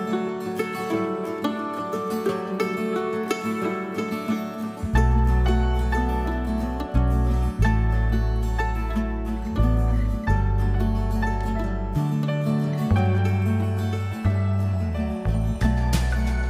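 Nothing in this one stands out as a technical problem; the audio just runs along without any glitches worth pointing to.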